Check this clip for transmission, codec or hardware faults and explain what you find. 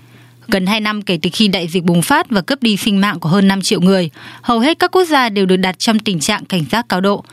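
There's one fault, and it runs the whole clip: gain pumping. The gain was likely set far too high, with a fast limiter clamping it on every loud syllable. The gain swings by around 15 dB, so everything sounds squashed.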